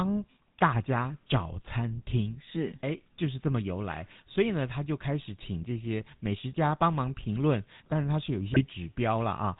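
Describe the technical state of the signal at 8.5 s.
GSM bit errors hit the signal from 8.50 to 8.64 s. For that stretch, corrupted bits reach the decoder and scramble the parameters it uses to rebuild each frame: the vocal-tract filter, the pitch lag and the gain. The spectrum is bent out of shape and the level jumps, so the speech breaks into squawks, pops and gargling. The 0.14 s span fits seven 20 ms codec frames being damaged, and the density of the disturbance points to roughly 2 percent of bits flipped.

Underneath this, and across the whole clip, the GSM full-rate codec is plainly audible. It models the voice as a filter driven by a sparse, regularly spaced pulse excitation, which leaves a buzzy, gravelly roughness on the speech. Nothing comes through above 4 kHz, so the sound is dull and band-limited. Both the roughness and the hard band limit fit the 13 kbps full-rate coder.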